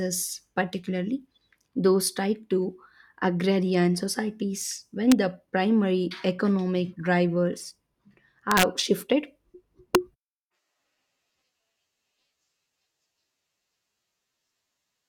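Violent cracks break into the speech at 5.12 s, from 8.51 to 8.63 s, and at 9.95 s. Each is an integer overflow: peaks pushed past the integer limit, by about 0, 3 and 4 dB, wrap to the opposite sign instead of being limited, snapping across the full range.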